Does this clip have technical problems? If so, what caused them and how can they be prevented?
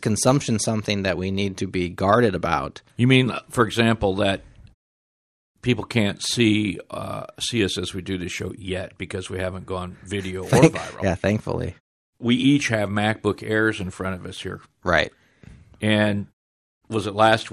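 Yes. MP2 compression damage runs through the whole clip and is plainly audible: the speech sounds dull, with a gurgling, granular texture. This is likely MPEG Layer II coding at a low rate, which fits about 80 kbps; with too few bits to share among its 32 sub-bands, the encoder shuts off upper bands and coarsely quantises the rest, so high frequencies flicker in and out. The muted pauses, where the background drops to silence between phrases, are intended behaviour and lose only very quiet sound. To prevent the damage, encode at a higher bitrate or use a more efficient codec.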